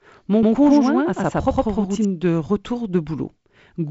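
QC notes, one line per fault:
0.43–2.05 s doubled audio track: an equal-level copy trails by about a tenth of a second and cuts off abruptly before "de retour de", likely from a second capture path.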